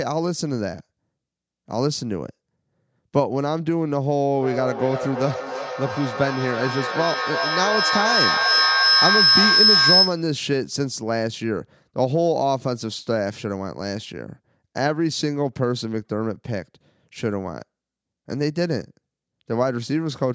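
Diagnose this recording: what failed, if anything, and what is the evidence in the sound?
An acoustic loop between two call devices sharing a room gained level on every loudspeaker-to-microphone pass. From 4.35 s to 10.38 s this feedback howl builds near 5 kHz, pulsing roughly every 300 ms and peaking about 6 dB above the speech.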